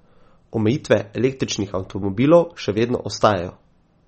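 Speech with a dull, watery quality throughout: nothing is heard above about 8.3 kHz, and the sibilants sound swirly and smeared. The likely cause is heavy MP3 compression. Short of bits, the encoder cuts off the treble and drops weak frequency lines, which fits a low bitrate of around 32 kbps.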